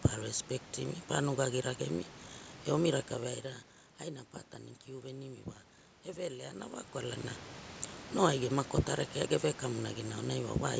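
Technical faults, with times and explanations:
There are no technical faults in this speech clip. Room noise sits about 16 dB below the speech, the call microphone processing leaves nothing above 8 kHz, and the level changes around 3 s and 6.5 s come from the talker moving relative to the microphone.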